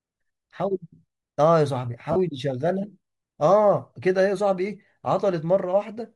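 Throughout the speech a grainy, breathy edge is plainly audible, likely Bluetooth LC3 compression at a bitrate that fits 48 kbps. From 2.12 to 2.16 s, lost LE Audio frames cause a brief noisy smear as the decoder repeats the last spectrum for about 37.5 ms, consistent with five 7.5 ms frames.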